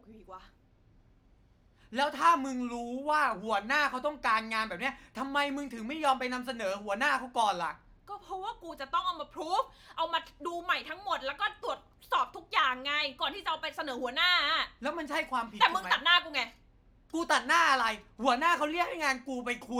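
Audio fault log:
No technical faults can be heard anywhere in the speech signal.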